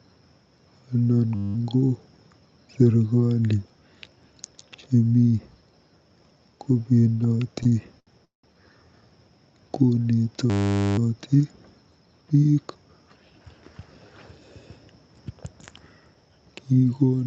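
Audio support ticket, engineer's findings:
System hang loop, 1.35 to 1.55 s: steady buzz at 100 Hz, a 10 ms chunk looping 20 times. The driver or host froze while the sound hardware kept replaying its ring buffer, which fits a tiny 10 ms buffer.

System hang loop again, 10.5 to 10.98 s: same 100 Hz buzz, same 10 ms slice repeating 48 times. Another freeze with the hardware cycling the ring buffer, just held longer this time. Worth checking driver or scheduling.

Repeated stalls (stutter), 7.63 to 8.45 s: speech drags and hiccups through four gaps, 300 ms filled in total (longest 186 ms), about 37% of that stretch. Packets arrived late, so the jitter buffer kept running dry and the receiver stretched the last sound until the audio resumed.

Jitter buffer speed-up, 12.58 to 13.54 s: speech sounds rushed at 115% speed, pitch unchanged, with about 150 ms trimmed. The buffer had overfilled, likely after a late burst of packets, so the receiver snipped out pitch-period pieces to catch up. 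The Opus call path on the WebRTC side tops out around 8 kHz, and that's where the high end stops.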